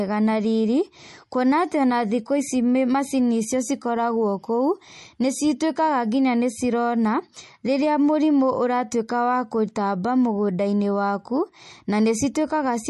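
Throughout, plainly audible MP3 compression: short of bits, likely near 40 kbps, the encoder cuts above 11.6 kHz and flickers weak detail, a watery swirl that plain low-pass filtering lacks.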